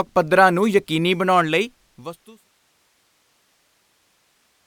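Nothing stood out on listening to the speech, which simply fades out smoothly by about 2.5 s, as an editor would do it.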